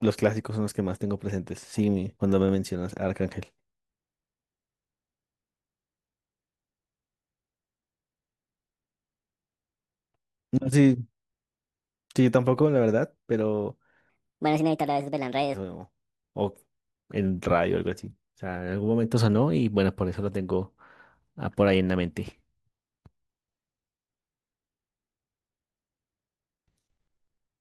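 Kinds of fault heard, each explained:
Section at the wrong speed: from 14.10 to 15.54 s the speech runs 1.41 times too fast, so it sounds hurried and is raised by roughly seven semitones, most likely because that stretch was played against the wrong clock. On a spectrogram, the harmonics and formant bands jump upward and spread apart for that span, and the syllables are squeezed in time. On the waveform, the bursts sit closer together until normal spacing returns.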